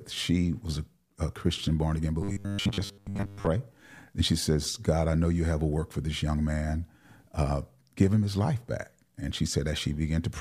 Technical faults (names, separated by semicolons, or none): robotic sound from repeated short buffers